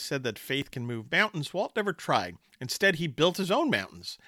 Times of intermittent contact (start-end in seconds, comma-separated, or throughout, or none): none